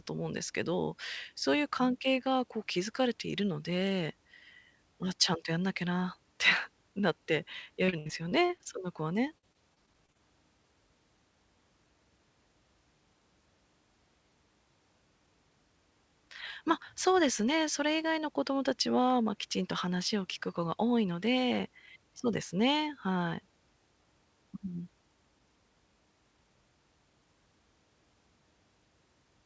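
From 7.86 to 8.67 s and again from 9.27 to 10.17 s, repeated packet loss made the call patch holes up to 70 ms by stretching the previous sound, giving choppy, robotic speech with pieces missing.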